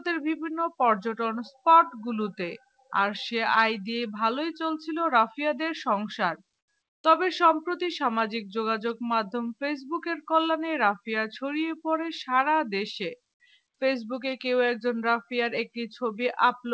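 The audio passes through a call path whose band stops at 8 kHz, consistent with G.722 at 64 kbps. From 6.59 to 6.68 s, the faint background, sitting about 59 dB below the loud passages, is replaced for 90 ms by a flat, textureless hiss about 9 dB quieter. This is comfort noise in place of the background, likely from discontinuous transmission: the sender paused, and the receiver substituted synthetic noise shaped like the room tone.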